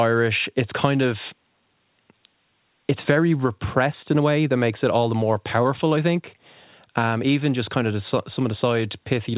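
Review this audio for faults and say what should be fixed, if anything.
The speech has clock drift between sender and receiver the whole way through. The sender's clock runs roughly 4 percent fast, so the jitter buffer keeps filling and the receiver has to throw audio away to stop latency creeping up. Fixing it would mean having the receiver resample to match the sender's rate instead of just trimming the buffer.

That's what you hear as repeated timing corrections from 0.15 s to 9.31 s. The playout is sped up to about 104 percent by snipping out small pieces at uneven spacing. The G.711 call path cuts off everything above 4 kHz. Smooth, continuous drift compensation on the receive side would prevent these cuts.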